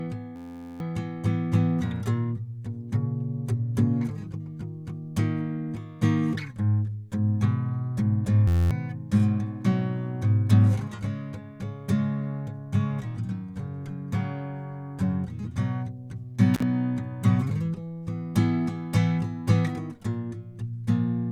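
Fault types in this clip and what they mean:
System hang loop: a frozen driver left an 11.61 ms slice repeating at 86.1 Hz, a steady buzz twice, fitting a 512-sample buffer, losing roughly 0.4 s and 0.2 s.
Intermittent contact: a loose connection opened for about 42 ms near 16.54 s, cutting the music out with crackle at both edges.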